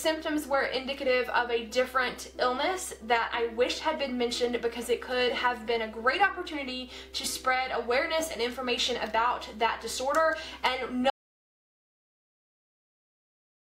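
The audio runs along fine until about 11.1 s, then drops out to silence mid-flow and never comes back, so the last 2.5 seconds or so of the clip are just dead air with no room tone at all. That's an audio dropout to silence: the input was most likely lost, whether through a disconnected device, a failed link or a stray mute, while the recorder kept writing silence. Anything after 11.1 s is simply gone.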